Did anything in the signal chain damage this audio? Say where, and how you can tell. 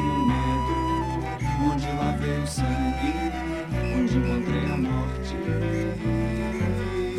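No, nothing I can hear points to damage at any stage of the chain, so there's nothing here to chase down.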